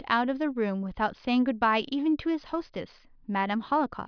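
No technical faults can be heard anywhere in the recording.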